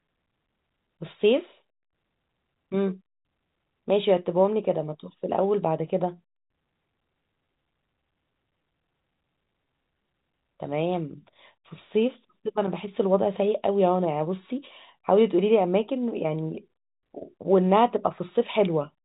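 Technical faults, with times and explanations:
The speech comes through an ordinary G.711 A-law telephone channel at 64 kbps, with nothing above about 3.8 kHz, as that channel passes, and no technical faults can be heard.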